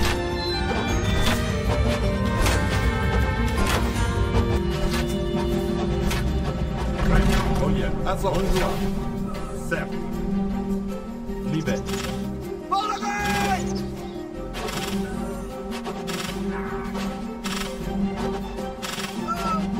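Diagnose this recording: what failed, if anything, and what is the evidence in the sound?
Channel delay (comb filtering) from 4.57 s to the end: the sound turns hollow and phasey, with fixed notches from around 100 Hz upward. One channel lags about 5 ms, pointing to a driver or buffer offset, and the mono sum cancels shared content.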